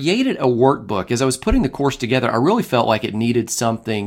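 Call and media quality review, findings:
Nothing to flag on this speech clip; no audible faults turned up anywhere in it.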